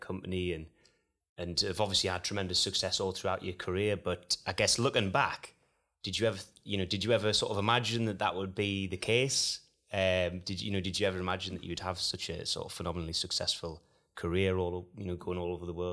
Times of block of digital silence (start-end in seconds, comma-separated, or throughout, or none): none